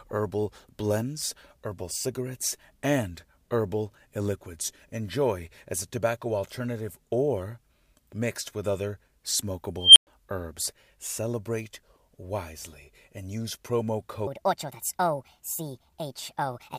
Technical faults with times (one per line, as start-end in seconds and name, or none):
9.80-10.07 unstable filter
14.27-16.79 section at the wrong speed